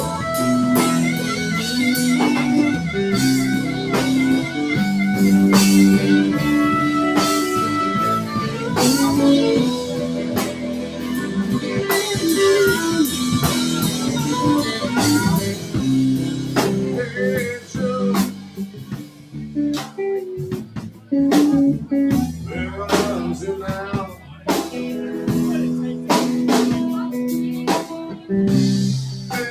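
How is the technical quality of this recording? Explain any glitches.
The technical quality is compromised by processing: a noise suppressor built for speech is acting on this material throughout.

Noise suppressor applied to music or sounds: for the whole clip, it treats sustained tones, ambience and decaying tails as noise, pulling the level up and down by around 10 dB. This makes the sound pump and thin. On a waveform, the envelope breathes unevenly, and on a spectrogram, tails fade early and patchily.

Sound cut by the noise suppressor: at 3.59–4.57 s, 8.22–8.66 s, 10.03–11.76 s, 15.55–21.11 s and 24.17–24.46 s, the suppressor clamps harder on sustained or fading material, dropping it by about 5–6 dB. Sudden onsets survive. The spectrogram shows lighter patches and the waveform dips, while attacks stay intact.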